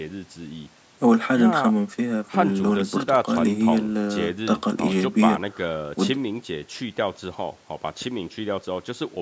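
No technical faults can be heard in the speech. It passed through a call's normal microphone processing, which trims the lowest bass and leaves nothing above 8 kHz.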